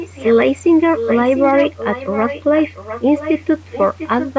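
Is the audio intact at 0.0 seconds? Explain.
No. From 0.0 to 0.35 s there is an echo leak: a faint, delayed copy of the speech, roughly 10 dB below the direct voice and trailing it by about 0.7 s. The likely cause is a far end playing the call over a loudspeaker, where the echo canceller left part of the microphone pickup in place and that residue was sent back into the call.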